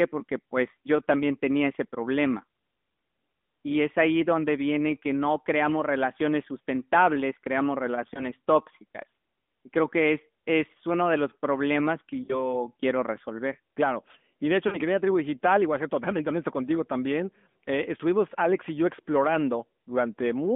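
From start to finish the speech sounds thin, buzzy and somewhat synthetic, confined to roughly 200 Hz to 3.5 kHz. This is the AMR narrowband mobile codec: a vocal-tract model rebuilds the speech from a few pulses per subframe, and the plainly audible damage fits its 10.2 kbps mode.

At 8.14 to 8.29 s there is a brief dip and warble. At 12.24 to 12.57 s and again at 14.68 to 14.79 s the sound smears and sags before recovering, rough at first. These are lost AMR speech frames. The first fits a single lost 20 ms frame, and the later two fit about 40 ms each. The decoder repeated the last good pitch and filter settings at falling gain.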